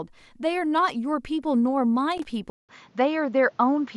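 At 2.12 to 2.31 s a loose connector crackle breaks through: a worn or dirty contact in the signal path intermittently opens and closes, chopping the speech. It comes across as a short, irregular burst of scratchy crackle lasting just under 0.2 s.

From 2.5 s to the end the sound changes character, with a gap of roughly 0.19 s at the transition, most likely an input switched to a poorer device. Nothing above 7.3 kHz remains, so the speech turns duller, and a new noise floor about 40 dB below the signal appears while loudness stays roughly the same.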